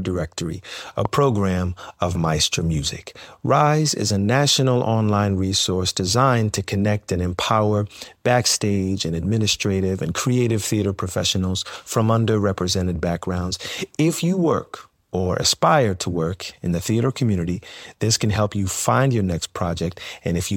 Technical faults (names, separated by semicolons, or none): loud pop